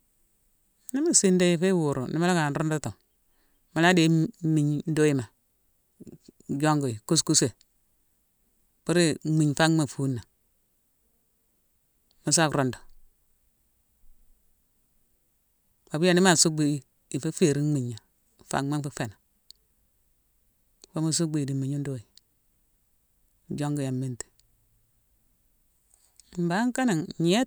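Nothing goes wrong anywhere in this speech recording, so there's no fault to point out at any moment.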